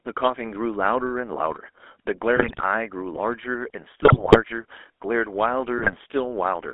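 From start to finish the speech carries the GSM full-rate codec's character, and the damage is plainly audible. The line is confined to roughly 300 Hz to 3.5 kHz, with nothing above that. The codec rebuilds the voice from a vocal-tract filter excited by a sparse, regularly spaced pulse train, which fits a 13 kbps GSM full-rate stream. That coarse excitation leaves a constant buzzy, gravelly roughness over every syllable.

GSM bit errors then break the decoded speech three times: 2.36 to 2.65 s, 4.02 to 4.39 s, and 5.78 to 5.95 s. In each span corrupted filter, pitch and gain parameters reach the decoder, so individual frames come out with a warped spectrum or a sudden level jump. The voice turns into squawks, pops and gargling. The 4.02 s burst is the longest and has the heaviest error rate of the three, about 4.8 percent.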